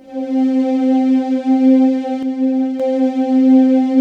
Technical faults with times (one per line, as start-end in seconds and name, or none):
2.23-2.80 one channel drops out